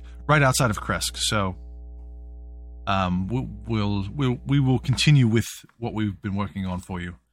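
From the start to 5.13 s, a steady mains hum sits under the speech: a fixed tone at 60 Hz with some low harmonics, roughly 15 dB below the talker. Power-line current has leaked into the signal path, as through a ground loop or a transformer close to the cabling. Unlike wind or handling rumble, it holds a constant pitch and level and doesn't follow the speech, then stops cleanly at 5.13 s.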